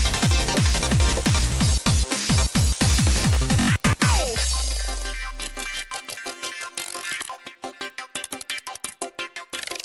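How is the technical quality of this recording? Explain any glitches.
Throughout, a steady ticking at 20 per second rides on the sound wherever there is signal, from a resampler restarted on every block. Each 50 ms block, which fits a 24 kHz to 48 kHz conversion, was converted separately, leaving a small error at every block edge.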